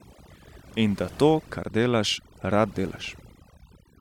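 Overdone noise removal runs through the whole clip: a noise reduction stage set far too aggressively cuts individual frequency bands whenever they sit near its noise estimate, removing quieter parts of the speech as well. Pauses fall to near silence with twinkling specks.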